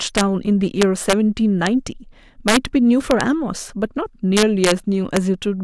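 Speech with integer overflow at 0.18–0.21, 0.82–1.13, 1.67, 2.48–2.57, 3.11–3.21, 4.37–4.72 and 5.17 s: peaks running about 1 to 4 dB past full scale wrap to the opposite sign rather than limiting, producing harsh cracks far sharper than clipping.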